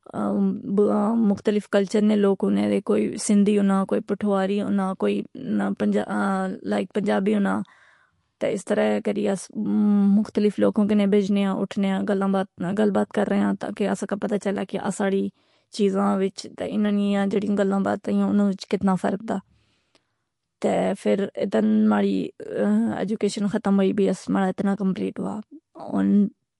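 Speech with plainly audible MP3 compression damage running the whole way through: nothing above 11.3 kHz, and weak detail flickers in and out, leaving a watery, swirly edge and chirpy s sounds. That's likely a starved MP3 encode, which fits roughly 48 kbps.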